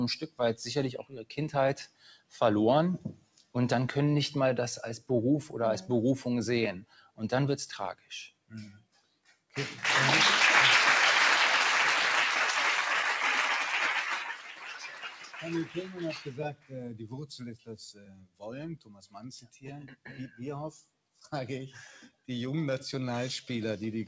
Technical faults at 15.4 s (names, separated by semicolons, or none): noise suppressor applied to music or sounds; sound cut by the noise suppressor